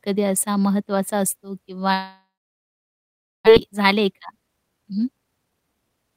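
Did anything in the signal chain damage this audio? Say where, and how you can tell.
Yes. From 1.93 to 3.49 s there is a long network dropout, likely from lost packets. The last sound is stretched into a decaying buzz, then about 1.16 s of near-silence. The waveform flattens and the spectrogram fades to empty. Nearly a second of audio never returns.

At the jitter buffer, from 3.57 s to the end, there is a speed-up: the receiver trims pitch-period slices to drain excess delay, so playback runs about 113% fast at unchanged pitch. Roughly a third of a second is cut. Harmonic spacing stays constant while syllables compress in time.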